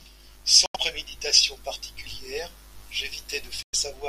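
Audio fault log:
0.66–0.76 s and 3.63–3.75 s, Bluetooth dropout: audio packets likely arrived at the headphones too late and were discarded. The speech drops to silence for about a tenth of a second, then resumes further along as if it had kept playing, skipping about 85 ms and 107 ms.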